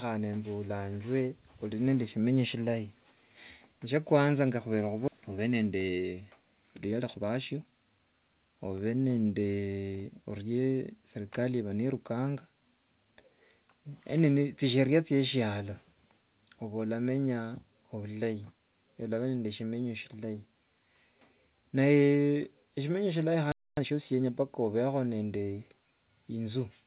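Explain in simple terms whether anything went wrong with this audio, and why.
Skip ahead at 5.08 s: about a second of sound never reached the player, or was thrown away because too much was already queued. Playback jumps straight past the missing stretch, so the sound on either side is joined almost seamlessly with nothing in between.

Jitter buffer speed-up from 5.18 to 6.22 s and from 6.92 to 8.36 s: the receiver had more sound stored than it wanted. It snipped out many tiny slices, roughly 0.15 and then 0.2 of a second in total. The sound runs about 13 and then 15 percent fast, at its normal pitch, and feels rushed.

Playback stall from 23.52 to 23.77 s: the sound stops dead for about a quarter of a second, then carries on. The player most likely ran out of sound to play, or was briefly held up, and went silent until it caught up.

Time-compressed catch-up from 23.77 to 24.27 s: right after that pause, the player clears its backlog by cutting out small pieces and blending the edges. 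The sound plays at one and a half times normal speed without changing pitch.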